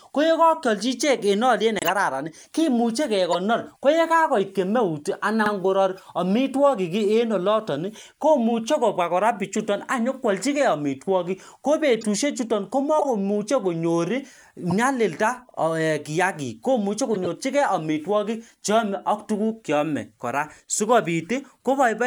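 At 1.79 s a corrupt frame muted leaves a 0.10 s gap that fits about four lost frames. On the waveform the signal drops abruptly to a flat line.

At 3.32 s, just before "ko yekakoit", the first corrupt frame decoded is heard. The damaged frame was played anyway, so energy lands at the wrong frequencies for a brief moment. On the spectrogram it shows as a short vertical smear.

At 5.46 s overlapping chunks cause a stutter. The new 10 s chunk starts 50 ms early, so that piece plays twice, and the waveform shows the same short segment back to back.

Further corrupt-frame bursts follow at 5.96 s, at 9.58 s (right after "oloton komuchei kobwa kora"), 11.94 s, 12.99 s and 14.70 s.

At 15.51 s, before "kiyakik komuchei", the 50 ms chunk overlap repeats, ten seconds after the first.

A last, longer corrupt-frame burst of about 0.12 s arrives at 17.14 s.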